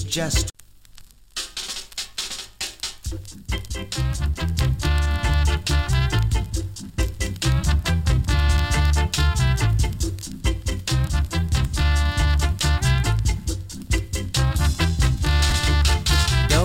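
Right near the end, at 15.5 s, there's a quick jumbled moment where chunks play out of order: a 10 ms chunk arrived one chunk late, leaving hard joins.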